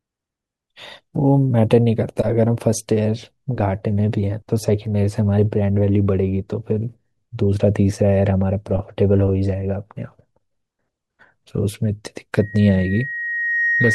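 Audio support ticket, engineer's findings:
Loudspeaker feedback squeal, 12.40 s to end of clip at 13.95 s. Single tone at 1.9 kHz swells over roughly a second and a half until it matches the speech level. Probable component: mic picking up its own loudspeaker, loop gain above unity at 1.9 kHz. Spectrogram shows one thickening horizontal line at 1.9 kHz. Waveform envelope ramps up steadily.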